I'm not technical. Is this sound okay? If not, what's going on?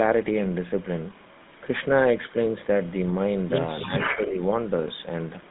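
No. Throughout, the sound has the buzzy, gravelly roughness of the GSM full-rate codec, an old mobile-phone coding that cuts off everything above roughly 3.7 kHz. That steady grit is different from a brief glitch.

From 3.80 to 4.45 s there is echo leak: a delayed copy of the speech comes back about 0.3 seconds later. It is a distinct repeat, not reverb or roominess. It is likely from a loudspeaker echo the far end's canceller missed. A much fainter trace returns from 5.44 s to the end.

From 3.84 to 4.37 s the speech is likely suppressed in double talk. The talker's own voice dips while the echo overlaps, rather than the whole line dropping.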